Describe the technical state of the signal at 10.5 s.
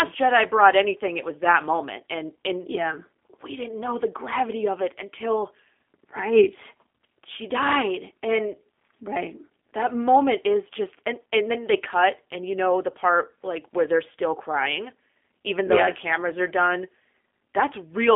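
At 10.5 s you're hearing G.729 codec damage, present through the whole clip: speech rebuilt from a filter, pitch predictor and sparse pulses, band-limited to about 3.6 kHz, sounding plainly rough and synthetic.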